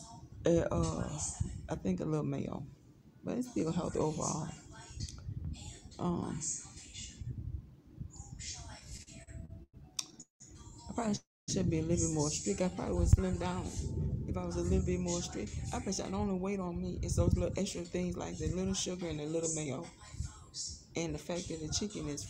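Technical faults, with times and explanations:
8.79–10.42 s, repeated stalls (stutter): eleven brief holds, longest 187 ms, stretch the sound by about 0.49 s; it drags in jerks rather than stopping once.
11.16–11.50 s, call audio freeze: one single hold of 0.32 s, mostly silent for 0.23 s, then resumes intact, likely from held-up packets emptying the jitter buffer.
12.42–13.07 s, jitter buffer slow-down: repeated pitch periods add 47 ms, so the sound runs at 94% speed, drawn out at unchanged pitch, without gaps.
14.98–19.98 s, jitter buffer speed-up: short pitch-period pieces are trimmed repeatedly, roughly 0.4 s in all, so the sound runs about 7% fast and hurried, pitch unchanged.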